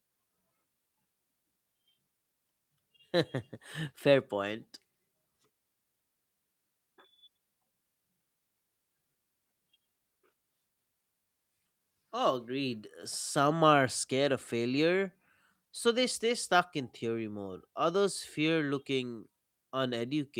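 No technical faults are audible.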